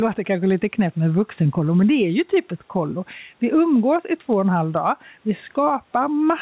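Gain pumping runs through the whole clip. The level swings by about 5 dB, ducking on louder speech and recovering in between, which squashes the dynamics. The likely cause is input gain set too high, with a fast limiter or compressor repeatedly pulling it back. The room noise sits about 44 dB below the speech, and the call path shows nothing above 4 kHz, which fits narrowband G.711 A-law at 64 kbps.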